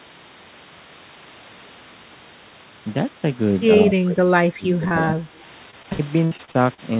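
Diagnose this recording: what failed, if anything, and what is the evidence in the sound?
The speech sinks abruptly from 3.77 to 5.40 s, by about 20 dB at its deepest, with roughly a second of that stretch pulled down in pieces rather than as one smooth fade. The stage is call processing, and the likely cause is speech suppressed in double talk. With both ends talking at once, the echo canceller could not tell the near talker from loudspeaker echo, so it attenuated everything it could not separate.

Inside that dip, two brief smears sit at 4.88 to 4.95 s and 5.05 to 5.09 s, each a short wobble where the sound seems stretched and then rejoins. This is short concealed packet loss at the network stage. About 20 ms of audio failed to arrive each time, and the receiver extended the preceding sound to cover the hole, briefly altering its timing before blending back into real signal.

From 5.71 to 6.80 s the speech turns choppy, with fragments missing throughout. 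This is repeated packet loss (robotic sound), again from the network and jitter buffer. Eight separate gaps occur, the longest 61 ms, and about a quarter of that span is synthesized fill. Each patch is a continuation of the last sound, and the next loss follows before the decoder settles. The band-limited G.711 call path, with nothing above 4 kHz, is the normal backdrop for all of this.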